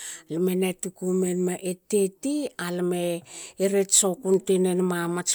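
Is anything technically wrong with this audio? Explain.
No, nothing technically wrong can be heard anywhere in this speech recording, and the signal stays intact throughout.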